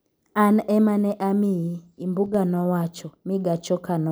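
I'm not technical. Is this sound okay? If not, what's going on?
No. At 2.26 seconds the speech suddenly gets quieter for a split second, until about 2.35 seconds, then snaps back to normal. This is most likely one channel dropping out: the recording has a left and a right side, and one briefly went missing, so only half the sound reached you. Unlike a full dropout, the speech never goes silent. It just dips abruptly, then recovers.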